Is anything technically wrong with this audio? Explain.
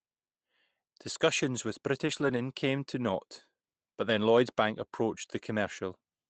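Yes. Between 2.07 and 2.37 s there is a lost packet rebuilt from error correction. Packets went missing, but each following packet carried a low-bitrate copy of the lost one. The decoder played those copies instead of leaving silence. About 160 ms of speech is rebuilt this way, across 8 separate lost packets. The sound never drops out. It turns rougher and noisier for that stretch, above the usual coding noise of the Opus call path, which cuts off near 8 kHz.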